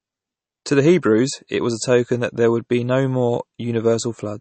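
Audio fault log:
Throughout: MP3 compression, likely, with nothing above about 8.3 kHz and plainly audible damage, which points to a bitrate around 32 kbps. With so few bits to spend, the encoder cuts the treble at a fixed point, so the speech loses its top end. It also discards weak frequency components, and these flicker in and out from frame to frame, giving a watery, swirling texture, metallic chirps on s sounds, and smeared attacks.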